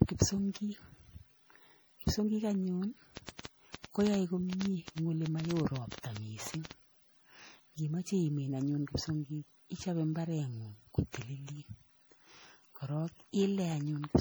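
Generation loss runs through the whole speech clip. The smeared, swirly, hollow quality goes beyond what one low-bitrate pass would cause, and consonant attacks blur. It likely comes from repeated MP3 re-encoding, around seven passes at something like 64 kbit/s, each quantising on a shifted frame grid so noise and spectral gaps accumulate.

A train of clicks runs from 3.17 s to 6.72 s: roughly thirty similar pulses at an irregular pace averaging 7.6 per second, peaking around 10 dB above the speech. They tick over pauses too, likely from interference or a faulty connection injecting pulses.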